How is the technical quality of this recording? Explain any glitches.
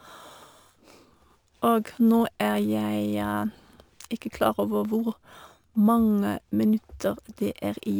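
The recording is degraded by imaging from sample-and-hold upsampling, present for the whole speech clip. The sound fits a 24 kHz source raised to 48 kHz by simply repeating samples, so mirrored spectra fill 12 kHz to 24 kHz about 30 dB down, heard as a metallic fizz tracking the level.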